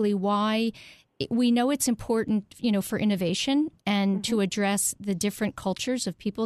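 No faults are audible anywhere in this speech recording.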